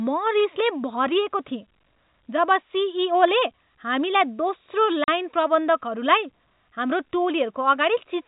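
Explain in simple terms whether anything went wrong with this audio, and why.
Packet loss filled with silence cuts the speech at 5.04 s. A 40 ms gap, likely two lost packets, went silent, with hard edges.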